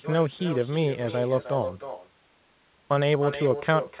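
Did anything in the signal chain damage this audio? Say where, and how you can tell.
Yes. At the call-processing stage, echo with no canceller is present throughout: the far end's loudspeaker is picked up by its microphone and returned unremoved. Every phrase is trailed by a thinner copy about 10 dB quieter, arriving roughly a third of a second later, over narrowband audio capped at 4 kHz.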